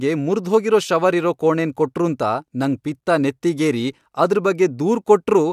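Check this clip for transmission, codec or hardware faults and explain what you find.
No faults are audible here.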